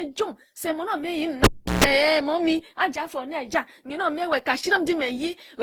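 Throughout this speech clip the sound is swirly, smeared and hollow, with blurred consonant attacks and more noise than a single pass of a codec at around 48 kbit/s would leave. This likely comes from generation loss, with the audio passed through an Opus-style codec around ten times. At 1.44 s a pop cuts the speech to near silence for about 0.35 s, including roughly 0.14 s of 60 Hz mains buzz, and a second pop as the sound returns at 1.84 s. That pattern is a cable pulled and plugged back in while live, with the buzz coming from the moment only the tip made contact.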